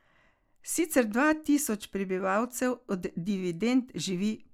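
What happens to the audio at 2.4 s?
Nothing goes wrong at 2.4 s; the speech there plays through intact, with no dropout, click, distortion or other audible fault.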